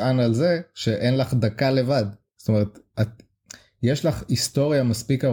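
No technical faults can be heard anywhere in this speech recording. There is no point in the timeline that calls for a fault description.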